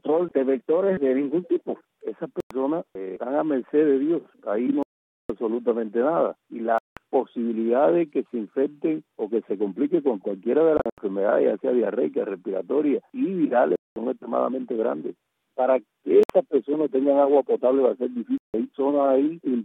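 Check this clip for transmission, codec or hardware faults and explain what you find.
Seven silent gaps break up the audio, with the pattern of a Bluetooth dropout. They fall at 2.40 s (about 100 ms), 4.83 s (470 ms), 6.78 s (180 ms), 10.77 s (several short holes over 200 ms, longest 80 ms), 13.76 s (200 ms), 16.23 s (60 ms) and 18.38 s (160 ms). The likely cause is packets arriving too late at the headphones and being discarded, so output cuts to silence and resumes further on, as though the sound had continued.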